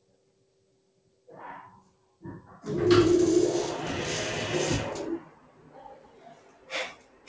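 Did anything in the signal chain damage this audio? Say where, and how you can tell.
Yes. The damage happens at the call-processing stage. A noise suppressor built for speech was left running on this non-speech audio, and it pumps the level around by roughly 20 dB across the whole clip. Sharp onsets mostly get through, but anything steady or decaying gets treated as background and pulled down, so the sound flutters and thins. The codec behind it sounds like ordinary G.722, with nothing above 8 kHz.

The clearest evidence is four stretches where the suppressor turns the sound down: 0.0 to 1.28 s, 1.83 to 2.22 s, 5.25 to 6.7 s, and 6.94 to 7.28 s. The level sinks by about 10 to 11 dB at its deepest in each one. The suppressor's gain estimate clamps down once nothing new arrives to convince it the sound is signal.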